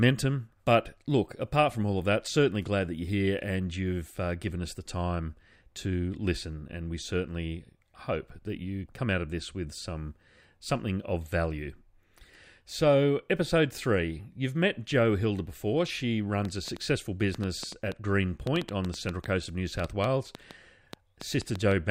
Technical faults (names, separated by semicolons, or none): train of clicks